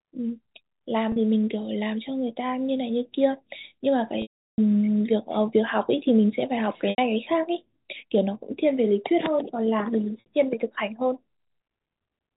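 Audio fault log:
1.12–1.16 s, 4.22–4.58 s, 6.90–6.98 s, 10.20–10.26 s: packet loss with pitch repetition. Gaps of 40, 80 and 60 ms, consistent with 20 ms packets, are bridged by repeating the last pitch period, giving a brief held buzz. The 360 ms gap outlasts the concealment, fading to silence before the speech cross-fades back.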